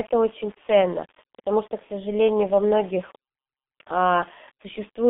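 Across the whole of the speech, a grainy, signal-following distortion rides on every syllable. It sits roughly 30 dB under the speech and turns rough and buzzy as levels fall, with the quietest tails sputtering instead of fading smoothly. That points to low bit depth without dither, likely coarse rounding to something like 7 bits. Unlike steady background hiss, this grit appears only where there is sound, changes with it, and vanishes in pauses.

Also running throughout is damage from the G.723.1 codec. Everything is confined to a narrow telephone band of about 200 Hz to 3.6 kHz, and the heavy coding, which fits a rate near 6.3 kbit/s, leaves the speech muffled and hoarse with smeared consonants. What separates this from simple band-limiting is the coarse, slowly updated voice model. A plain filter would dull the sound but keep consonants crisp, whereas here they blur and the timbre turns rough.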